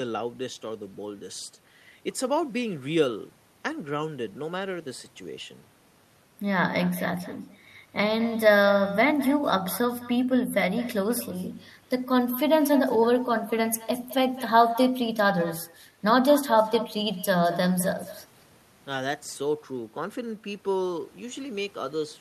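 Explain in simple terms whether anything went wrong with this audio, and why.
Echo with no canceller throughout: the far end's loudspeaker leaks into its microphone, so the speech returns about a fifth of a second later, quieter.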